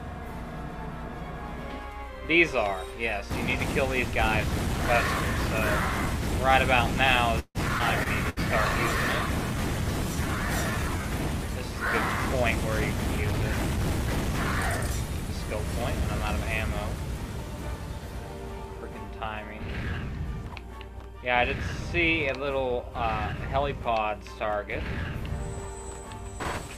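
At 7.39 s the audio stalls until 7.58 s. The last sound is carried on as a fading buzz for about 154 ms, including roughly 50 ms of near-silence, and then resumes exactly where it stopped with nothing lost. That makes it a call audio freeze, likely caused by packets held up in transit until the jitter buffer ran dry. A loss would skip material; this only inserts a pause.

Just after, between 7.79 and 7.82 s, playback lurches forward in a skip ahead. Only a few milliseconds are filled, and around 70 ms of audio is simply gone, with the two sides butted together almost seamlessly. Unlike concealed loss, there is no smear or fading tail, just an abrupt jump with barely a seam.

From 7.84 s a call bitrate drop takes hold. The encoder falls from 128 kbps to 22 kbps and stays near that floor for about 2.75 s, until roughly 10.69 s. The sound turns coarse and watery, and the top end is shaved away so everything sounds muffled. 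This is a sustained change in tone colour rather than a brief event, which separates it from the packet-level glitches inside it.

Within that low-rate stretch, at 8.03 to 8.08 s, there is a short concealed packet loss. About 20 ms is patched by extending the preceding sound before blending back, but around 60 ms of real material never arrives. It is heard as a quick smear or wobble. It is smaller and less obviously a gap than the burst that follows.

At 8.29 to 8.39 s comes a burst of packet loss. Several consecutive packets went missing, so the receiver stretched the last sound for about 70 ms while fading it, producing a held buzz or decaying hiss. Playback then picks up about 60 ms further on. The audible tail plus missing content mark this as a burst, not a freeze: the audio does not resume from where it paused.

From 10.09 to 11.03 s a jitter buffer slow-down stretches the audio to about 90 % speed. 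Roughly 102 ms is added by repeating single pitch cycles and pause fragments many times over. Pitch stays put while sounds are drawn out. That preserved pitch is what distinguishes it from a tape-style slowdown, and the absence of any gap separates it from a freeze.

Finally, between 12.43 and 14.78 s a jitter buffer speed-up runs the audio at about 107 % speed. Around 150 ms in total is trimmed away in many tiny cuts of one or a few pitch periods each, as the receiver works off excess delay. The result sounds slightly hurried at unchanged pitch. Because the removal is spread thinly rather than taken in one chunk, it reads as rushing rather than as a skip ahead.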